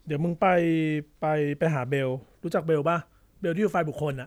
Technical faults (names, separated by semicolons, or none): none